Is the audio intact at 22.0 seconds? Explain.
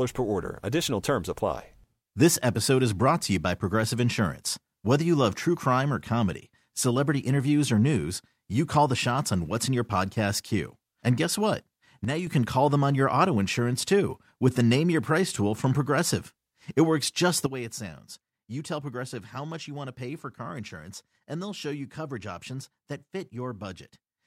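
No. From 17.46 s, right after "works just the", to the end at 24.27 s, a sudden gain jump drops the speech about 11 dB, likely from a digital gain change applied without a ramp. Unlike a fade, the step is instantaneous, and the background noise drops with the speech.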